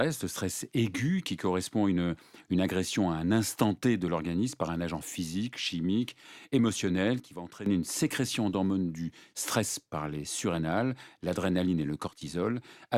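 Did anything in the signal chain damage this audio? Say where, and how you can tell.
Yes. At 7.2 s the speech and the background noise drop together by about 11 dB in a single step, then come back at 7.66 s. It happens again from 12.07 to 12.21 s, about 12 dB down. Because the noise floor falls with the speech and the edges are instant rather than faded, this is a sudden gain jump, likely from a digital gain stage in the processing chain applying a new setting with no ramp.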